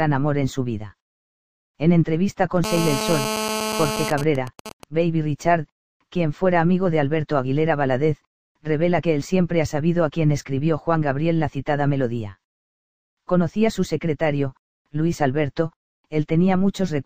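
From 2.64 s to 4.10 s there's a GSM phone buzz, a harsh, raspy drone at 217 Hz with lots of harmonics stacked on top, sitting only about 4 dB below the wanted audio and having nothing to do with it. A 2G handset close by is in a call, firing radio bursts about 217 times a second. Something in the audio chain rectifies those pulses and turns them into this steady, gritty tone.

Right after, from 4.11 s to 4.84 s, it turns into GSM signalling bursts. The continuous buzz gives way to even ticks with a longer 217 Hz buzz twice a second, roughly ten decibels under the audio. The phone is still in the call, but its user has gone quiet, so it only sends occasional short groups of bursts instead of a constant stream. The same rectification picks each group up as a little stutter of clicks and buzz.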